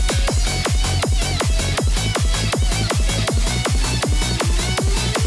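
No technical fault can be heard anywhere in the audio; the signal holds steady throughout, with no interruption, distortion or level problem.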